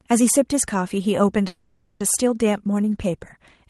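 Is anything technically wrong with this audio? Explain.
Yes. Call audio freeze, 1.47 to 2.02 s: a fading buzz fills about 0.53 s, likely from delayed packets emptying the jitter buffer; the speech then resumes with nothing lost.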